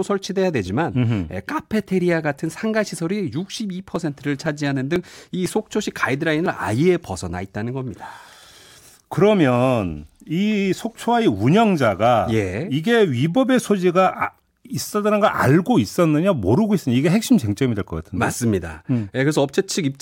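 From about 2.96 s to 6.46 s the speech carries a string of small, evenly spaced ticks, about one every 0.5 s, heard only while sound is present. These are periodic USB or driver dropouts: at a steady interval, something stalls the USB bus or the audio driver, and roughly a millisecond of signal is skipped outright. Each skip splices the waveform together with a tiny jump, producing the click.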